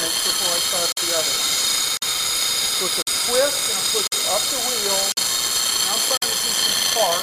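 From start to finish, a loud, even hiss sits under the sound. This is low bit depth with dither. The signal was rounded to very few levels, which fits a 4-bit word length. Random dither was added before the rounding. The rounding error therefore turns into steady white noise, not harsh distortion. The hiss is strong, roughly 10 dB below the signal. It never pumps or changes with the material.

Then come short holes of silence, each 50 ms long. They start at 0.92, 1.97, 3.02, 4.07, 5.12 and 6.17 s. This is a gap between chunks. The audio was split into 1-second pieces, and a stretch of silence was placed at each join. Nothing is cut out. The sound simply stops and restarts. The steady spacing gives a regular stutter just under once per second.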